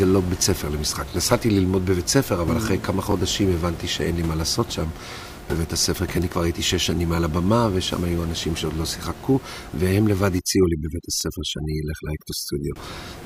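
Overdone noise removal runs from 10.39 to 12.76 s. A noise reducer set far too aggressively is cutting individual frequency bands down or out wherever they sit near its noise estimate, taking quiet parts of the speech along with them. The background collapses toward silence flecked with twinkling artefacts. The room noise, about 15 dB below the speech, is what the reducer is fighting.

Overlapping chunks appear from 11.21 to 11.23 s. A new processing chunk, of a length that fits 2-second blocks, begins before the previous one has finished, so about 23 ms of audio plays twice at the join and is heard as a brief stutter.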